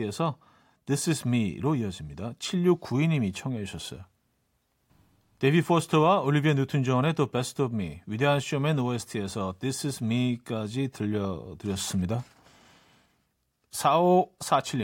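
No technical faults can be heard anywhere in the recording.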